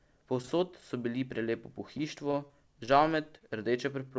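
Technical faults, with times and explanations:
0.42–0.84 s, repeated packet loss (robotic sound): just before "so bili prelepo", four lost packets, the longest 24 ms, were patched by repeating earlier sound. That covers 57 ms and drops 20 ms, giving a choppy texture with pieces missing. The spectrogram shows smeared, repeated frames under the 8 kHz ceiling of the G.722 call path.
1.98–3.42 s, scattered short gaps: after "so bili prelepo", about seven isolated losses, the longest around 20 ms, were concealed by extending the preceding sound. They drop 60 ms in total and add 7 ms, heard as brief ticks and hiccups. The waveform shows small discontinuities and the spectrogram short smeared patches.
4.08–4.13 s, short stall from a late packet: a packet arrived late and the jitter buffer ran dry, so 23 ms of the last sound was stretched before playback resumed where it left off. Nothing is lost, but the sound hangs briefly with a slight buzz or dip, seen as a flat held stretch in the spectrogram.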